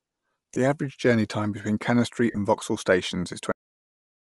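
The clip is speech, and the whole of it was likely carried over a Bluetooth LE Audio link using the LC3 codec. At a fairly low rate the encoder discards much of the upper spectrum and fills the gaps with noise, which gives consonants and vowels a plainly audible breathy, grainy edge. The texture fits 7.5 ms frames at around 48 kbps. This Bluetooth LC3 compression colours every syllable from start to finish. On top of that there are two spells of lost LE Audio frames, where packets never arrived and the decoder had to conceal the gap by replaying the last spectrum with randomised phase. The first, at 0.55 s, lasts about 15 ms, which fits two frames, and is heard as a brief noisy smear within the sound. The second, between 2.31 and 2.37 s, is worse: about 45 ms is missing across a 60 ms stretch, the longest unbroken hole running around 40 ms. The concealment there turns the speech into a hissy, pitchless blur that starts to fade before real audio resumes. 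Finally, the clip has a cut-off end. The last buffers were never written out, so at 3.52 s the speech stops abruptly in the middle of a sound and drops straight to digital silence with no natural decay, staying silent to the end.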